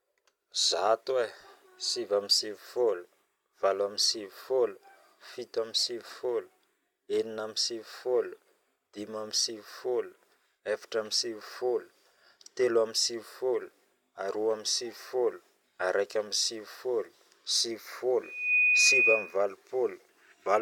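Near the end, from 18.23 to 19.37 s, there's loudspeaker feedback squeal: the mic is catching its own loudspeaker, and around 2.5 kHz the loop gain tips past one. The tone swells over about a third of a second and sits roughly 10 dB above the speech.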